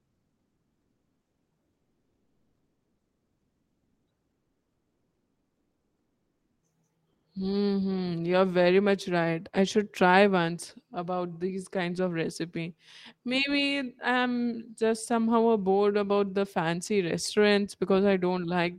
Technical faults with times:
0.00-1.51 comfort noise in place of the background
4.33-6.61 comfort noise in place of the background

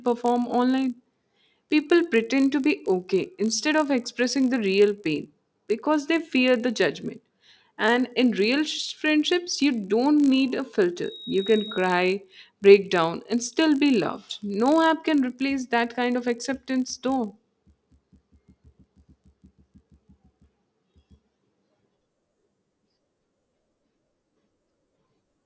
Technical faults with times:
0.00-25.46 resampler restarted on every block

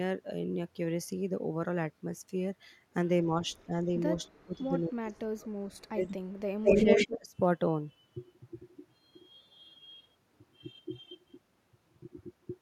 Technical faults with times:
3.65-3.93 speech suppressed in double talk
4.26-6.15 speech suppressed in double talk
6.64-7.18 echo leak
6.66-7.35 speech suppressed in double talk

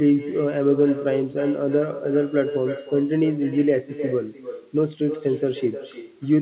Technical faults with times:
0.00-6.42 echo with no canceller

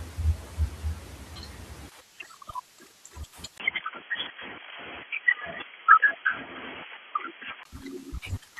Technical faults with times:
3.58-7.65 input switched to a poorer device

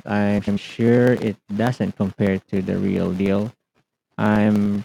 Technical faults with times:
0.38-0.58 frames out of order
0.78-4.75 periodic USB or driver dropouts

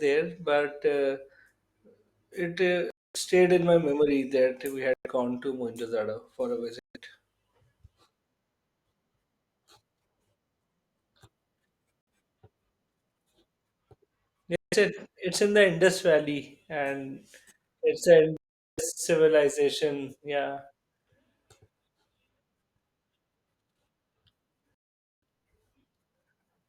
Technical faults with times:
2.90-3.17 Bluetooth stall
4.94-5.06 Bluetooth stall
6.79-6.97 Bluetooth stall
12.01-12.07 Bluetooth stall
14.56-14.74 Bluetooth stall
18.37-18.80 Bluetooth stall
24.75-25.22 Bluetooth stall

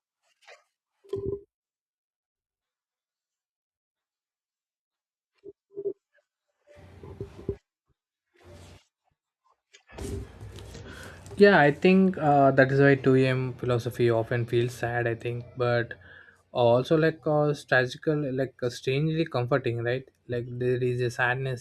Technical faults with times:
none

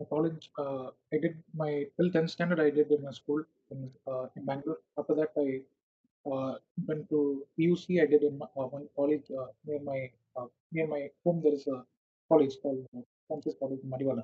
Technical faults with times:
0.00-2.40 speech suppressed in double talk
2.86-5.63 speech suppressed in double talk
5.77-5.95 background gated by the echo canceller
6.23-11.83 speech suppressed in double talk
12.28-14.24 speech suppressed in double talk

